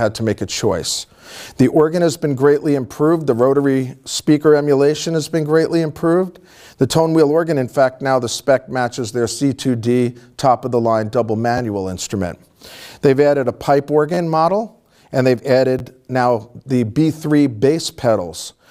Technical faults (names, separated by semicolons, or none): repeated buffer